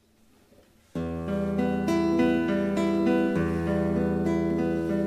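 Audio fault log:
Throughout: crude rate conversion. There's a gritty, inharmonic fizz riding on the louder and brighter parts, roughly 35 dB down. It sounds like samples were simply dropped with no filtering, which fits a 48 kHz to 44.1 kHz change, leaving a repeating error pattern that throws off unrelated tones.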